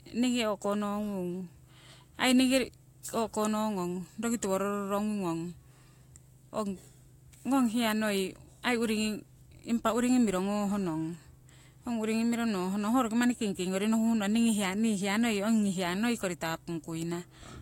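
Speech runs under a steady video or display buzz for the whole clip, a rasping hum at 60 Hz, the field rate of a picture signal, sitting far below the voice, roughly 35 dB down. A screen or video cable nearby is coupling its vertical refresh into the audio path. Mains hum is smoother, a near-sinusoid at 50 or 60 Hz with a few harmonics, while this buzz carries a spray of hash above it, tied to the picture rather than the power line.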